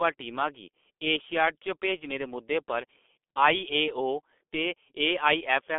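Throughout the speech, the signal has been squeezed through the G.723.1 codec, whose slow 30 ms frame model fits a rate near 6.3 kbit/s. It keeps only about 250 Hz to 3.5 kHz, passing nothing above 3.6 kHz, so the speech sounds heavily muffled and hoarse, with blurred consonants.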